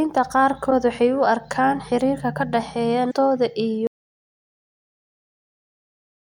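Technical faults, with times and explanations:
0.67–0.72 s and 3.10–3.13 s: damaged data in a compressed stream. Two brief glitches break into the speech, each lasting a few hundredths of a second. The second comes right after "arkaan xiriirka ka dhexeeya". Corrupted bytes in the encoded stream make the decoder misread those frames. It loses sync and hunts for the next valid frame header.
3.87 s to the end: audio dropout to silence. The speech stops abruptly mid-flow and never returns. The gap is silent, with no room tone or background left. The input was likely lost, for example through a disconnected device or a failed link, while recording carried on writing silence. Whatever was spoken after this point is gone.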